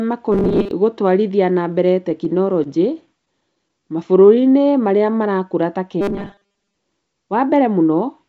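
Speech sent over a wideband call path, with nothing above 8 kHz, which fits G.722 at 64 kbps, shows four kinds of fault. From 0.32 to 0.71 s and again from 6.01 to 6.76 s there is robotic sound from repeated short buffers, likely caused by a 5 ms chunk being looped for most of each stretch. This gives a rigid 200 Hz buzz that shows as evenly spaced horizontal harmonic bands on a spectrogram. Between 2.10 and 3.99 s come scattered short gaps, about ten of them, each at most about 20 ms long and concealed by continuing the previous sound. They are heard as brief ticks and show as small smeared vertical seams. A jitter buffer slow-down from 3.80 to 5.12 s repeats pitch periods to add 119 ms, so the audio plays at 92% speed at unchanged pitch, with stretched syllables. A jitter buffer speed-up from 7.13 to 7.84 s removes about 70 ms of pitch periods, so the audio runs at 109% speed with the same pitch, and the waveform looks compressed in time.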